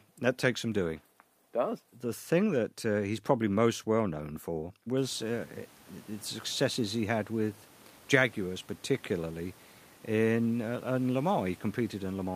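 No technical faults can be heard in this speech recording. The room noise picks up around the five-second mark, climbing by about 22 dB, and afterwards sits about 29 dB below the speech.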